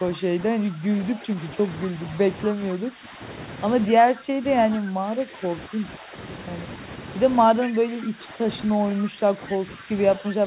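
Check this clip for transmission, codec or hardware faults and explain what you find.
Two faults are audible in this speech: repeated level dips from double-talk suppression and two brief scraps of returned echo. The whole clip is band-limited with nothing above 4 kHz, consistent with a narrowband G.711-style call codec.

Speech suppressed in double talk occurs from 0.0 to 1.97 s, 2.53 to 3.2 s, 4.04 to 6.15 s, and 7.63 s to the end. The likely cause is an echo canceller that could not tell the near talker from loudspeaker echo while both sides spoke, so it attenuated everything. The speech sinks by up to about 10 dB in uneven stretches, totalling roughly a second in the first span, half a second in the second and a second and a half in the third.

Echo leak appears at 7.63 to 7.71 s and 9.05 to 9.09 s, likely from a far-end loudspeaker setup whose canceller let some of its microphone pickup return down the line. 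Each leak is a short, faint delayed copy of the speech arriving about 235 ms late. The first sits about 20 dB below the direct speech and the second about 25 dB below, heard as brief fragments rather than a sustained echo.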